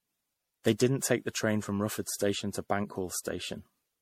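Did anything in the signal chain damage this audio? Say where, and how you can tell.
Yes. The damage sits at the codec stage and runs through the whole speech clip. The sound is swirly, smeared and hollow, and consonant attacks blur. Nothing reaches above 16.5 kHz. This is generation loss, likely from repeated MP3 passes, perhaps around seven. The smearing is worse than a single pass at about 64 kbit/s would give. Each re-encode quantises again on a shifted frame grid, so noise and spectral holes pile up.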